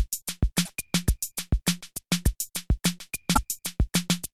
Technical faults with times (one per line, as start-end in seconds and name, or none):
0.64-0.70 broken MP3 bit reservoir
3.33-3.39 broken MP3 bit reservoir